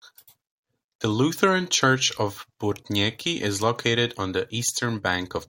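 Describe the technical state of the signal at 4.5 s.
At 4.5 s the speech signal is intact, with no audible dropout, distortion, glitch or other technical fault.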